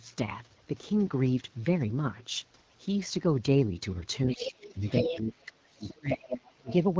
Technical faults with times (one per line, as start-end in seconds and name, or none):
4.27-6.73 other side's voice leaking through
4.31-5.43 speech suppressed in double talk
5.74-6.69 speech suppressed in double talk